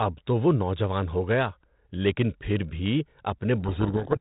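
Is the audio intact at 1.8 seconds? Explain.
Yes, the audio is intact at 1.8 seconds, with the speech carried normally through the 32 kbit/s G.726 ADPCM telephone-band path.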